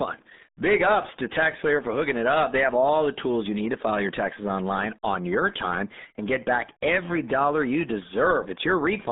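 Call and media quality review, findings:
RealAudio 14.4 codec, whole clip. Speech muffled and gargly; nothing above 3.8 kHz, band about 200 Hz to 3.7 kHz. Heavy codec damage, consistent with a RealAudio 1 encode at 8 kbit/s for dial-up, discarding upper frequencies and coarsely modelling the rest.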